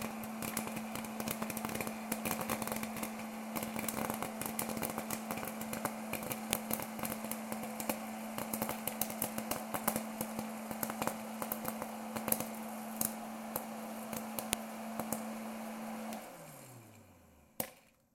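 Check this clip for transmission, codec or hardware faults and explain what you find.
There is one fault, a file header played as audio. Sharp, loud clicks at 6.53 s and 14.53 s, eight seconds apart, come from header bytes at each joined piece being played as samples.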